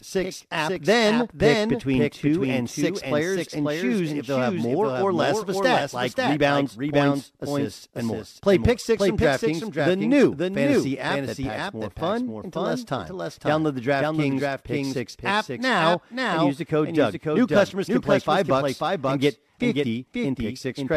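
A second, slower capture path has likely mixed the same speech in twice, producing a doubled audio track throughout. A full-band copy trails the original by about half a second, roughly 5 dB quieter, with no decay or room colour.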